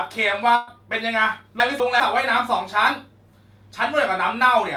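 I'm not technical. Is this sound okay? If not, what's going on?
No. There are two faults.

At about 0.55 to 0.70 s there is a burst of packet loss. Some of the speech never arrived in time. The gap is covered by the last sound, held and fading out. Then the speech resumes about 120 ms further on, with that part missing.

From 1.6 to 2.0 s there are chunks out of order. Two 200 ms pieces play in swapped order, because one arrived a step late. Nothing is lost, but that moment sounds jumbled.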